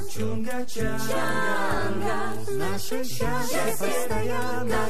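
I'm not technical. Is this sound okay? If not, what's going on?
No, there's a DC offset running through the whole clip. The entire waveform sits nudged off its centre line by a fixed amount. You can't actually hear that shift, but it eats into the space loud moments need before they distort.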